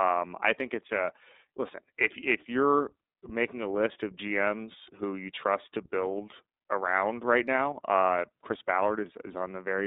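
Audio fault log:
Throughout: iLBC codec. The speech sits in a narrow telephone band, roughly 250 Hz to 3.7 kHz, so nothing above 4 kHz survives and the top end sounds dull. The damage is plainly audible. Each frame's excitation is coded on its own, without reference to the frame before. That leaves a rough, slightly synthetic texture. The coarseness fits 30 ms frames in the 13.33 kbps mode.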